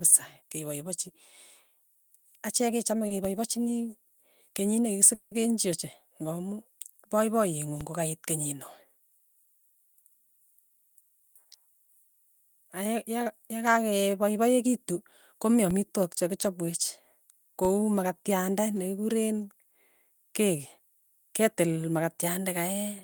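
At 3.07 s there is a short stall from a late packet. A packet arrived late and the jitter buffer ran dry. The receiver stretched the last sound for about 30 ms, to 3.13 s, then resumed without loss. It sounds like a briefly held syllable with a faint buzz.

A DC step follows at 3.25 s, just before "kokaiit kenyinoee". The waveform's zero line jumps to an offset that lasts until 7.81 s and then falls back. Each shift lands as a low thump. The speech carries on unchanged. A second DC step sits at 15.71 s, right after "yaka yakakepaipaekitu komi". It holds until 17.65 s and thumps on entry and return.

From 5.14 s to 5.34 s the speech gives way to a buzzy continuation of the last sound for about 170 ms, with no true silence. Then it picks up where it left off, so nothing is lost. This is likely a call audio freeze, with delayed packets emptying the jitter buffer.

A jitter buffer speed-up runs from 10.69 s to 11.94 s. 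Too much audio had built up, so the receiver trimmed many tiny pitch-period slices, roughly a seventh of a second in total. Speech plays at about 112% speed with the pitch unchanged and sounds rushed.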